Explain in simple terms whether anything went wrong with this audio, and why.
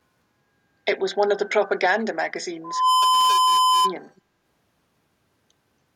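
Two problems can be heard in the speech.

From 1.99 to 2.13 s, and again from 4.16 to 4.21 s, faint scraps of the voice return about 0.28 s late. This is echo leak. The likely cause is one caller on a loudspeaker whose echo canceller let some of the sound it should have removed get through.

From 2.64 to 3.94 s there is loudspeaker feedback squeal. A microphone picked up its own loudspeaker, so a single 1 kHz tone kept amplifying itself. It swells over about a third of a second and ends up louder than the speech.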